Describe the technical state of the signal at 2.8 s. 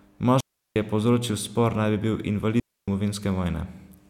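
At 2.8 s the signal sits inside a digital wireless dropout that runs from 2.60 to 2.88 s, just after "bi bil". The receiver has lost too much of the incoming data stream to decode it, so it mutes for about 280 ms, fading out and back in almost instantly. What you hear is a clean hole of near silence. Unlike an analogue radio dropout, there is no hiss, crackle or noise burst at either edge.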